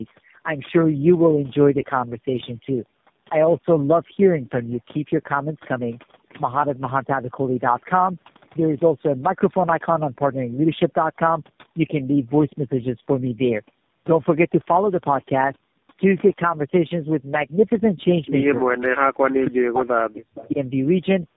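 It's a speech recording, and the whole clip carries overdone noise removal: the background drops and breaks up into twinkly specks. Tandem speech coding is there throughout too, sounding like about three speech codecs in a row, ending in something like AMR-NB, with nothing above 3.7 kHz and a rough, muffled warble from each coder re-squashing the last one's output. At 18.00–18.05 s and 20.38–20.47 s there's an echo leak, a faint copy of the voice about 274 ms late and well down in level, likely from a loudspeaker end whose echo canceller let some through. Between 19.2 and 20.58 s the talker gets speech suppressed in double talk, dipping as much as roughly 40 dB over around a second and a half, likely because the canceller got confused with both sides talking and turned everything down.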